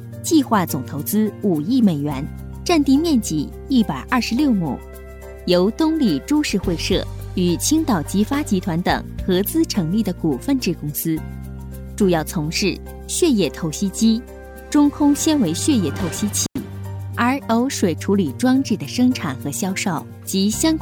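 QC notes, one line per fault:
16.43–16.58 s, intermittent contact: the sound drops out for about 91 ms with crackle at each edge, as a loose plug or cable briefly opens the line.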